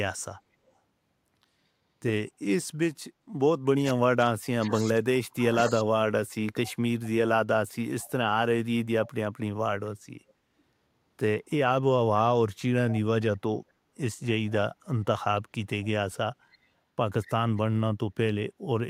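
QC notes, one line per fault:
3.71–6.05 s, speech suppressed in double talk: the voice dips and breaks up in pieces, falling by as much as about 40 dB across roughly two seconds of this stretch. The likely cause is an echo canceller that, with both sides talking at once, couldn't separate this talker from loudspeaker echo and turned everything down.
8.01–8.1 s, 15.82–15.87 s, 16.52–16.58 s, 17.22–17.61 s, echo leak: faint scraps of the voice come back 225 ms late, about 30, 30, 35 and 25 dB below the speech respectively. This is likely the far end's loudspeaker pickup getting past its echo canceller and being sent back.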